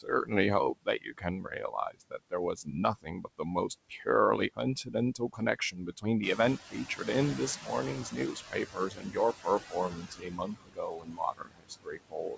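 Speech carrying noise suppressor artifacts throughout: the suppressor pulls steady background down by about 21 dB frame by frame, so the residue sinks between phrases and rises under them. Speech cut by the noise suppressor recurs from 0.01 to 0.32 s (about 14 dB, roughly 150 ms affected), 0.74 to 4.08 s (about 22 dB, roughly 1.5 s), 4.54 to 6.05 s (about 19 dB, roughly half a second), and 6.36 s to the end (about 22 dB), where quiet consonants and word tails are treated as noise and sound swallowed. The noise suppressor catching up shows at 6.22 to 6.58 s. The room noise jumps about 13 dB near 6.0 s, and the lagging noise estimate lets it through with only about 10 dB of reduction for 360 ms before it settles. The audio stops at 8 kHz, which fits a G.722 call path at 64 kbps.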